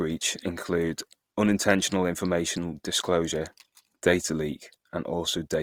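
Opus compression runs through the whole of this speech clip, heard as a grainy, rough texture on the voice with a noisy haze filling the upper bands rather than hollow or swirling gaps. The likely cause is an Opus encode in its music-oriented CELT mode, still full bandwidth, but starved of bits in a way that fits roughly 24 kbps, so the encoder patches thin bands with folded or noise-like content, making the damage plainly audible.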